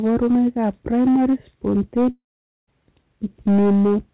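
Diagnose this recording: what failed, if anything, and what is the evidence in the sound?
Hard clipping runs through the whole recording, at a converter or gain stage. Peaks are driven about 7 dB too hot. Roughly a tenth of samples are flattened.

The audio drops out from 2.1 to 2.69 s, likely a long network dropout. A fading fill briefly continues the sound, then nearly half a second of silence follows.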